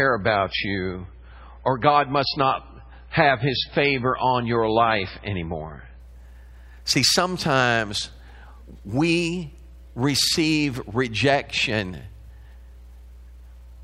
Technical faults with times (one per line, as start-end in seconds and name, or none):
0.00-6.00 adaptive stream starting at a low bitrate